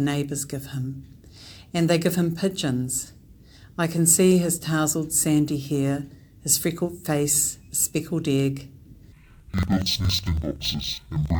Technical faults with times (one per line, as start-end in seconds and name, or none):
9.12-11.40 interleaved audio read as planar